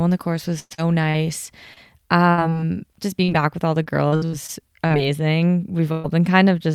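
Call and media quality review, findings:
Choppy, robotic speech with repeated dropouts from 0.59 to 2.56 s, right after "on the course was". Repeated packet loss in the network path: the jitter buffer fills each gap by extending prior audio. About 320 ms lost, longest gap 110 ms.

Same robotic chop, 3.24 to 4.92 s. Repeated packet loss again, concealment patching many short holes. About 280 ms missing, longest gap 67 ms, roughly a sixth of the stretch covered by filler.

Brief held-over sound fading out at 5.92 to 6.06 s, then speech jumps ahead. Burst of packet loss: a run of about 120 ms lost or late, bridged by decaying repetition of the last sound, with that content gone.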